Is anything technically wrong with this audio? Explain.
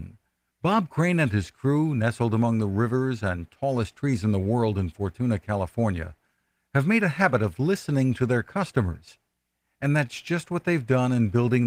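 No, nothing is technically wrong: the speech carries the light, fullband character of Opus voice compression in its hybrid mode, which fits a rate of around 24 kbps, and that is the codec doing its normal job rather than a fault.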